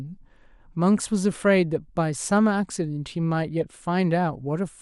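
Throughout the speech, the audio was likely squeezed through MP2 compression at too low a bitrate, one that fits about 80 kbps. Upper sub-bands lose their bits and drop out while the rest are coarsely quantised, leaving a dull top end and plainly audible gurgling, granular distortion.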